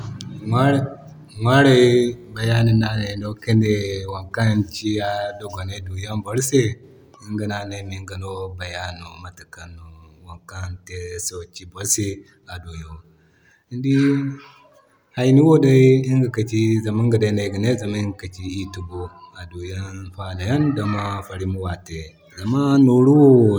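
Nothing goes wrong anywhere in the speech recording, so there's no technical fault to point to at any moment.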